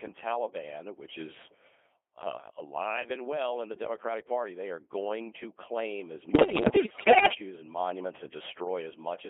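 Speech run through the Codec 2 vocoder for its whole length, and the robotic, buzzy texture fits a rate of about 2.4 kbit/s. Only pitch, voicing, level and a coarse spectral envelope survive, band-limited to roughly 300 Hz to 3.4 kHz and rebuilt from sine waves, so the original waveform is gone and the damage is heavy. From 6.28 to 7.34 s, between "going to claim as" and "and monuments", bit errors on digital voice radio corrupt the frame parameters, at something like one bit in ten. Pitch, level and tone colour jump from frame to frame, and the sound breaks into warbling, bleepy gibberish.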